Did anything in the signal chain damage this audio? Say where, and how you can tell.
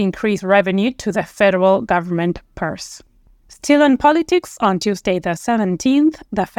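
No, nothing along the signal chain audibly damaged this speech recording. Listening through it, no stage from capture to playback leaves any mark that points to a problem.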